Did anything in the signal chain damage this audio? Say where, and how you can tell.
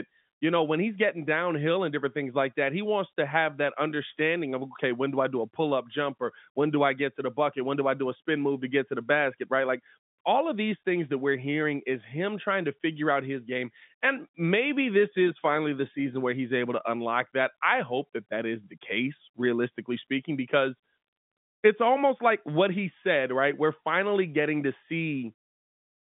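No, nothing in the chain stood out as damaging on listening; the narrow telephone-line sound of the speech, with nothing above roughly 3.7 kHz, is simply how G.711 coding sounds when it is working as intended.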